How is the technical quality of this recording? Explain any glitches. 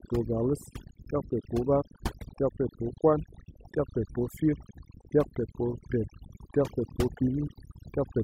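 The recording suffers from overdone noise removal across the whole clip. Denoising was pushed so hard that bands near the noise floor get gated out, taking quiet speech detail with them. The result is speech over a near-silent, twinkly background.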